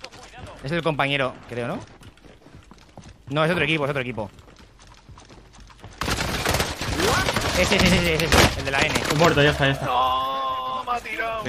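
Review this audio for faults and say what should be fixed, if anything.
Nothing here needs fixing; I couldn't hear any technical problem anywhere in the audio, so it can stay as it is.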